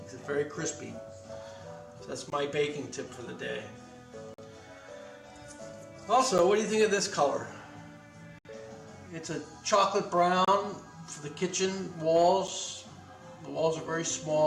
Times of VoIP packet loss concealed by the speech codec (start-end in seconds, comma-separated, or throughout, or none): none